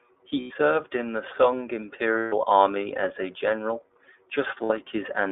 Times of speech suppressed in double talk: none

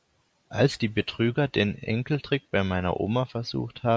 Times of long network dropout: none

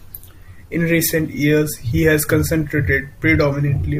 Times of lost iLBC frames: none

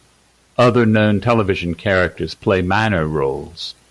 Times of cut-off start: none

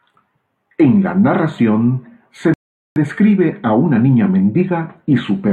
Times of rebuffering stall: 2.54-2.96

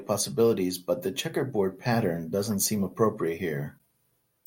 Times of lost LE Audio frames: none

